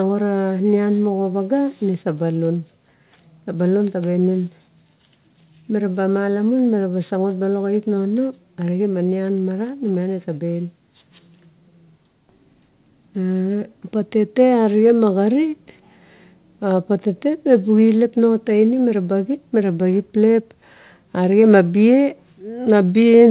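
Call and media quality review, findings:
No call or media quality findings; the speech carries through the G.711 call path, and its band-limit leaves nothing above 4 kHz.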